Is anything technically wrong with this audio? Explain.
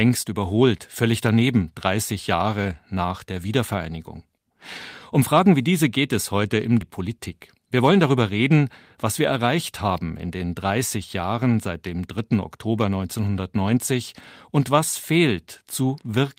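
Yes. There are two faults.

At about 6.81 s, right after "geht es heute im", there is a skip ahead. Roughly 0.4 s of the speech was dropped, likely because the jitter buffer overflowed while later audio was already waiting. Playback jumps forward with no gap filled in. The two sides join almost directly, so part of the phrase simply vanishes. The delay shrinks by a similar amount.

From 6.92 s to 8.04 s, just before "reden was wir erreicht", there is a jitter buffer speed-up. The buffer still held more audio than it wanted. The receiver cut many short pitch-period pieces in a row, about 70 ms in total. The speech runs about 5% faster at the same pitch. It sounds slightly hurried.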